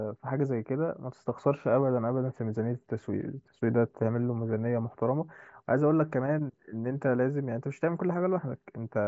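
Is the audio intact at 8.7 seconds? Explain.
Yes, the audio is intact at 8.7 seconds, with the speech passing through the Bluetooth mSBC headset codec as it should, its band stopping just below 8 kHz.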